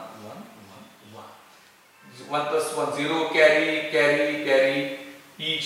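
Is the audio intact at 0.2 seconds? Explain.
Yes, the audio is intact at 0.2 seconds, with no fault present at that moment.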